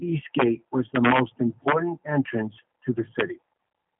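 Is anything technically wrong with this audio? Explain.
Yes. The speech runs through a G.729 codec from start to finish, with plainly audible coding damage. The sound is boxed into a telephone line band of about 150 Hz to 3.5 kHz, with nothing above 3.7 kHz, and has the slightly rough, synthetic quality of a low-rate voice codec, which fits an 8 kbit/s G.729A stream. The codec rebuilds each 10 ms frame from a vocal tract filter, a pitch predictor and a handful of pulses rather than sending the waveform itself, so fine detail is replaced by an approximation. On a spectrogram the energy stops sharply near 3.7 kHz with empty space above, and the harmonics look smeared and blocky.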